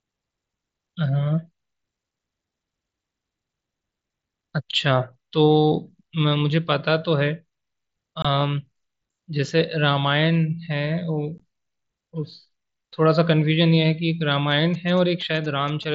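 At 8.22 to 8.25 s and again at 11.38 s the speech drops out in two short holes from unconcealed Bluetooth headset packet loss. Audio packets between headset and phone never arrived, and nothing filled the gaps. The first hole lasts about 22.5 ms, which fits three lost frames. The second lasts about 15 ms, which fits two. Each has hard edges, unlike the soft, grainy upper-band flicker of the light mSBC coding heard through the rest of the clip.

From 14.52 to 15.85 s GSM signalling bursts break in at roughly 25 dB below the speech. A nearby 2G phone sent short clusters of radio bursts, and the audio circuitry rectified them into a galloping dit-dit-dit of brief buzzes at 217 Hz. That rhythmic, stop-start pattern and the 217 Hz pitch set it apart from steady 50 or 60 Hz mains hum.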